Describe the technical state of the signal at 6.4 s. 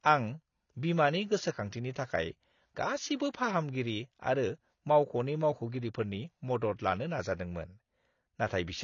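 At 6.4 s the speech carries AAC compression damage that runs through the whole clip. Nothing sits above 7 kHz, and sibilants warble and fizz, likely from AAC-LC coding near 24 kbps starving bands of bits. A spectrogram shows a hard 7 kHz ceiling.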